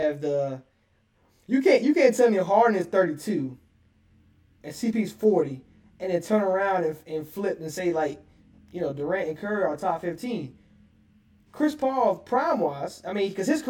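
Channel delay (comb filtering) runs throughout. One channel lags by around 20 ms before mono summing. Evenly spaced notches from near 20 Hz make the speech sound rough or slightly doubled.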